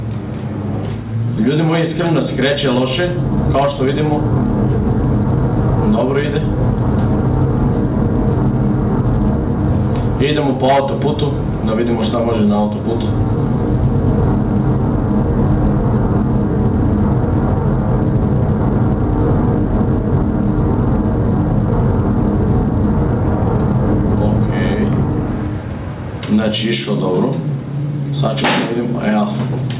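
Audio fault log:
throughout: gain pumping. The gain swings by about 10 dB and ducks under every loud sound, likely from excessive input gain with a fast limiter clamping it. The waveform looks squashed and breathing.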